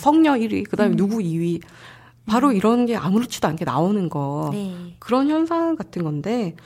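A short speech recording with no technical faults to point out. There is nothing here that calls for a time, a value or a cause.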